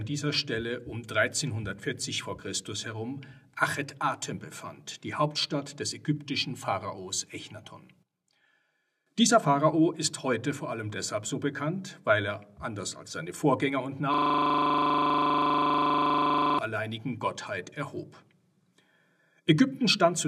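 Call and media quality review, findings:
System hang loop, 14.14–16.59 s: one 40 ms slice repeats exactly, about 60 times, giving a steady 25 Hz buzz. Points to a stalled driver or host while the audio device kept replaying its ring buffer. Unlike packet-loss concealment, the repeats are identical and never fade.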